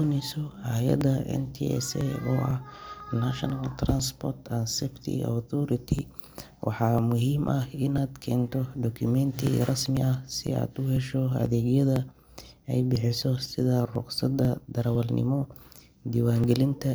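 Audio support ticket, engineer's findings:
Periodic USB or driver dropouts, 0.52–16.44 s: regular ticks every 0.5 s during speech. Roughly 2 ms skipped each time; something blocking the USB bus or audio driver on a fixed cycle.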